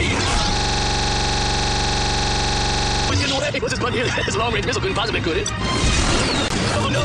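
From 0.57 s to 3.10 s the sound locks up in a system hang loop: a single 43 ms slice repeats about sixty times at 23.4 Hz, giving a rough, buzzy stutter. The machine stalled while the hardware kept replaying its ring buffer, which fits a 2048-sample buffer.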